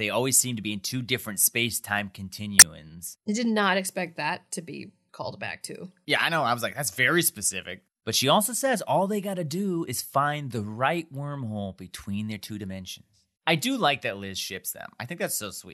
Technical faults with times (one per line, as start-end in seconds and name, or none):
2.58-2.62 corrupt frame decoded